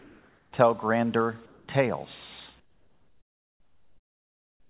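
From 0.00 to 0.52 s, 1.46 to 1.68 s, and 2.60 s to the end, the background becomes steady, featureless hiss. This is comfort noise in place of the background, likely from discontinuous transmission. It sits about 2 dB lower, then about 14 dB lower in the final stretch.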